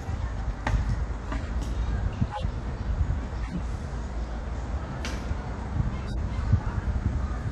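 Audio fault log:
1.28 to 1.49 s, 2.31 to 2.43 s, 3.43 to 3.60 s and 6.08 to 6.17 s: corrupt frame decoded. Each is a short burst of misplaced sound peaking around -20 dBFS (the last nearer -25 dBFS), lasting from two to about seven damaged frames. The decoder misread the frame data and put energy at the wrong frequencies, adding a foreign sound rather than the gap or repeated texture that a dropout or concealed lost packet would leave.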